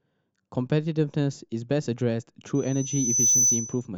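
Loudspeaker feedback squeal, 2.55 to 3.87 s: the microphone hears its own loudspeaker, so a 6 kHz tone swells above the speech within a second.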